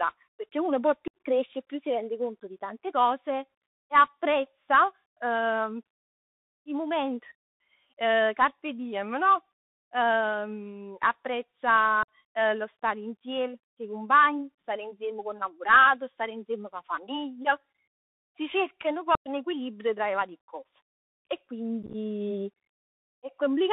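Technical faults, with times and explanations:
Throughout: Bluetooth CVSD headset codec. The speech sits in a narrow 150 Hz to 3.7 kHz band, with scratchy s sounds, overload distortion on loud highs and a grainy hiss underneath.
1.08–1.14 s, 12.03–12.08 s, 19.15–19.29 s: unconcealed Bluetooth headset packet loss. Gaps of about 64, 53 and 105 ms cut out abruptly, and the speech comes back briefly quieter.
21.83–21.95 s: unconcealed Bluetooth headset packet loss, scattered this time. About 56 ms goes missing in short holes of up to 11 ms spread over 113 ms, so it sounds like crackle and choppy speech.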